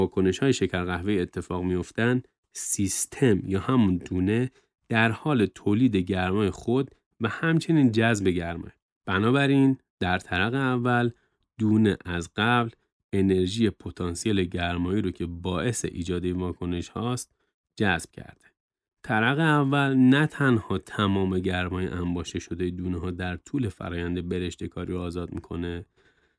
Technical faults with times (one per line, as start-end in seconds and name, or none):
none